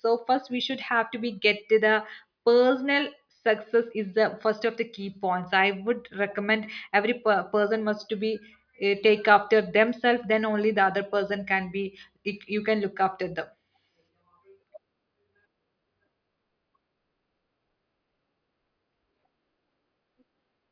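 Listening to this speech recording, nothing technically wrong stood out at any point.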